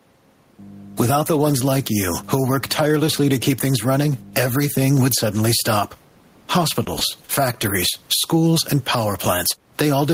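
Gain pumping runs through the whole speech clip. The swing is roughly ten decibels. Loud and soft parts sit close in level. The likely cause is gain set far too high, with a fast limiter clamping down.

A short stall from a late packet occurs three times: at 6.85 to 6.90 s, 6.99 to 7.04 s, and 7.25 to 7.32 s. Each time a packet arrived late and the jitter buffer ran dry. The receiver held the last sound for 20 ms, 20 ms, then 40 ms. Nothing is lost. The sound just drags briefly, with a faint buzz or dip, and the delay grows by the same amount. The quiet room noise sits about 42 dB below the speech.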